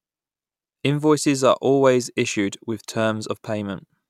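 No technical faults turn up anywhere in this recording of speech. At no point in the audio does anything go wrong in the signal.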